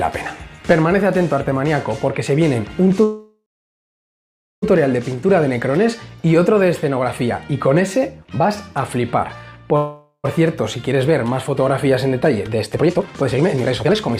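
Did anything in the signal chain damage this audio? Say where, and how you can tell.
Yes. At the network stage there are two call audio freezes, at 3.03–4.64 s and 9.76–10.26 s. In each, the last sound is stretched into a fading buzz or hiss, then silence (about 1.2 s in the first), likely because delayed packets starved the jitter buffer. Playback resumes where it stopped, so nothing is lost, unlike a dropout.

From 12.06 s to 14.17 s a jitter buffer speed-up runs the audio at about 149% speed while pitch holds steady, trimming roughly a second of backlog by cutting pitch-period slices. Unchanged pitch separates this from a resampling or clock-rate error.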